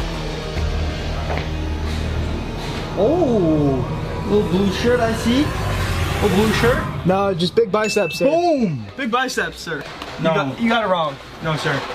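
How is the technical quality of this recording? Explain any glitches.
No technical glitches can be heard anywhere in this recording.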